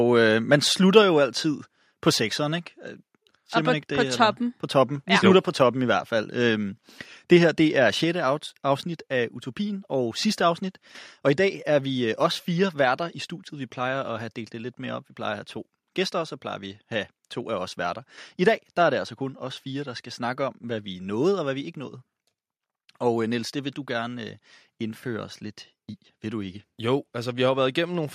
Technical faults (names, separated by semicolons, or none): microphone volume stepped down